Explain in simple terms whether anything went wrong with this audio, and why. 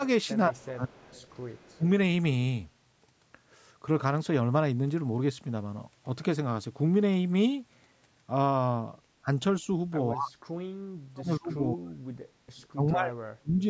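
Two kinds of fault can be heard in this speech.

The first is speech suppressed in double talk. The speaker's voice suddenly drops away or thins out in places. This happens from 0.49 to 1.01 s, 1.73 to 1.84 s, 9.23 to 9.27 s, 10.11 to 10.37 s, 10.95 to 12.08 s and 12.71 to 13.64 s. The worst dips, near 11 s, nearly silence the voice. The likely cause is both people talking at once. The call's echo canceller then turned everything down.

The second is an echo leak. A faint, delayed copy of the voice trails behind it. This happens from 0.94 to 1.73 s and again from 12.57 to 12.67 s. The copy arrives about 174 ms late. It is likely leftover sound from a loudspeaker that the microphone picked up and sent back.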